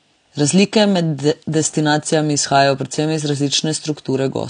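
Throughout, the speech shows transcoding between lossy codecs, likely an MP3 stage near 96 kbit/s followed by AAC-LC near 32 kbit/s. The second encoder spends bits on the first one's artefacts and adds its own, and nothing remains above 9.8 kHz.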